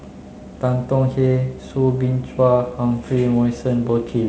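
Nothing goes wrong in this bit of speech, which comes through G.722 wideband telephone coding at 48 kbit/s, so it reaches up to about 7 kHz with a faint hiss in the upper band and a touch of extra grain in the lower band, just what that codec gives at this rate.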